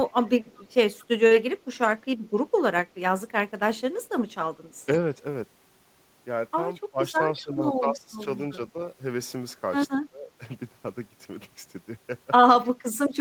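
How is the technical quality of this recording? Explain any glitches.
Two glitches show up in the speech: a bit of echo leak at the start and some speech suppressed in double talk later on.

Echo leak: At 0.05 to 0.12 s there's a very faint repeat, then a clearer one from 0.46 to 1.06 s, about 30 dB under the voice. Both trail the speech by 226 ms, likely a far-end echo canceller letting loudspeaker pickup slip back down the line.

Speech suppressed in double talk: Between 6.91 and 8.79 s the voice dips by as much as about 20 dB in patches adding up to about a second, and again briefly from 9.99 to 10.4 s. It's likely an echo canceller mistaking overlapping talk for echo and ducking both.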